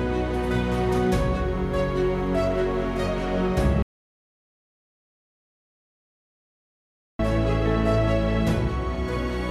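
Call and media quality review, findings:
Audio dropout to silence, 3.83 to 7.19 s. Sound cuts mid-flow, about 3.4 s lost. Gap is silent, with no room tone, comfort noise or decay. That rules out a noise gate or packet-loss concealment. Likely input loss (device disconnect, link failure or mute) while the recorder kept writing silence. Abrupt resumption at 7.19 s.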